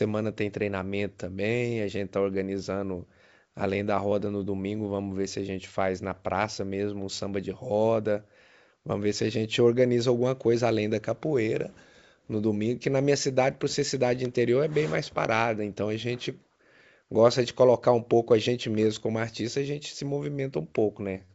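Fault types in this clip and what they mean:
No faults found in the speech; it is carried over G.722 wideband telephone coding at 64 kbit/s, with nothing above 7.7 kHz.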